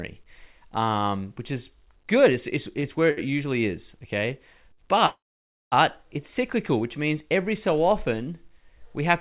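At 2.80 to 2.85 s, 3.11 to 3.26 s (just before "usually is") and 4.73 to 4.87 s, the speech hitches in three short stalls from a late packet. Each time the jitter buffer ran dry and the last sound was stretched, by 28, 62 and 50 ms, before carrying on with nothing lost. You hear a held, faintly buzzy syllable. On a spectrogram the harmonics run flat and smeared for those stretches, and the waveform shows a repeating, slightly dipping cycle.

From 5.06 to 5.74 s, just before "it's cyclical which means", the audio freezes for about two-thirds of a second. This is likely a call audio freeze, where packets were held up in transit. After a brief fading buzz, around 540 ms is silent, and then the speech resumes exactly where it stopped, so a gap has been inserted rather than anything removed. On the waveform this is a short decaying tail followed by a flat line, and on the spectrogram a blank vertical band, with the call path's usual ceiling at 4 kHz on either side.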